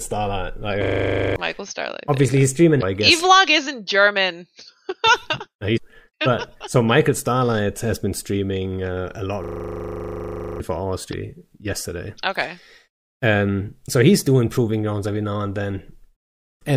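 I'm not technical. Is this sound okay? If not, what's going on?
No. There are two kinds of fault in this speech recording.

A system hang loop: twice, the computer briefly froze while the sound hardware kept replaying its last 40 ms of audio, 25 times a second. From 0.84 to 1.36 s and from 9.44 to 10.6 s this becomes a rapid stuttering buzz, and roughly half a second, then about a second, of speech is lost.

Damaged data in a compressed stream: in four places, part of the compressed file was corrupted, so the player misread it and briefly lost its place before recovering. Each is a quick chirp or blip of about 40 to 50 ms, at 2.79, 5.74, 11.09 and 16.58 s.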